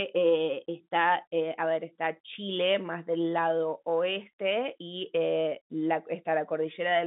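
No faults are present; the speech sits in an ordinary telephone band of about 150 Hz to 3.7 kHz, consistent with 64 kbit/s G.711 mu-law coding.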